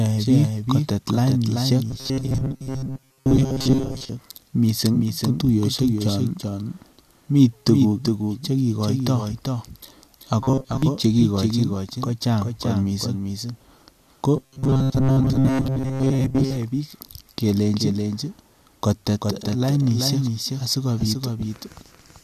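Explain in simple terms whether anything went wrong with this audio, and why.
A doubled audio track runs throughout: the speech is repeated about 0.4 s later, somewhat quieter and with no fading tail, unlike a room echo, likely from a second, slower copy being mixed in.

Robotic sound from repeated short buffers appears from 1.90 to 4.09 s (after "biik kotet lainisiek", before "mising ko tuiyosiek chon"), 10.41 to 10.83 s (before "che kigochin kochang kot") and 14.37 to 16.57 s. It is a steady metallic buzz, about 133 times a second, rather than a delayed copy, likely from tiny chunks being replayed while real audio is skipped.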